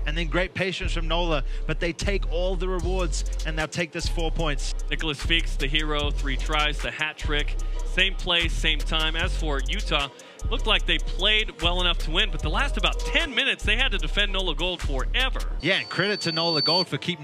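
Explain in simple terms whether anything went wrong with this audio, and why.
Near the end, a microphone picked up the loudspeaker it was feeding, and the sound went round and round that loop, getting stronger each time. That is loudspeaker feedback squeal. From about 15.60 to 16.87 seconds, a single high-pitched tone around 4.5 kHz grows over roughly a second until it is a bit louder than the rest of the audio, then it stops.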